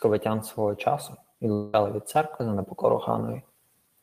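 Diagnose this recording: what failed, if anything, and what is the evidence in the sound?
The network stage most likely failed: a long network dropout stopped packets arriving for about 0.2 s, from 1.53 to 1.75 s. The receiver bridged nearly the whole gap with concealment, extending the last bit of speech into a buzzy, fading tail instead of falling to silence. When the stream resumes at 1.75 s, the speech does not pick up where it left off, because the audio sent during the outage never arrived and was never played.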